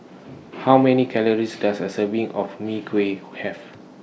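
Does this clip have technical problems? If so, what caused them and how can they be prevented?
No, nothing in this speech recording needs fixing and there is nothing to prevent.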